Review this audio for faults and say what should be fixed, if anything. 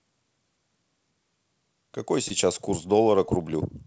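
Two spots of short concealed packet loss, at about 2.28 s and 3.26 s, each lasting a few hundredths of a second. In both, a slice of the call arrived too late for the decoder, roughly 20 ms each time, which fits one lost packet. The receiver papered over the gap by stretching the preceding sound forward and then crossfading back into the real signal, so you hear a quick smear or tiny wobble right there. The band stops at 8 kHz, as expected from the G.722 call path. To prevent the loss, give the link a bit more headroom or a slightly deeper jitter buffer, and turn on forward error correction if the setup allows it.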